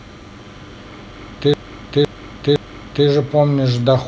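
From 1.54 s to 3.07 s the speech is caught in a repeated buffer. New audio failed to arrive in time, so the playback device played its last 512 ms block again, three extra times, which fits an 8192-sample buffer. The result is a slow stutter, with the same half-second fragment looping with hard joins. Nothing seems to be lost afterwards. A spectrogram would show three identical tiles separated by sharp vertical seams, and the waveform would show matching copies with abrupt edges.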